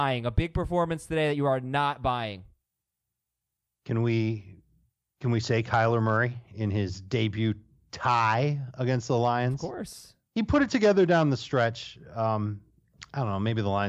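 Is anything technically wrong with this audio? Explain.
No, nothing technically wrong can be heard here.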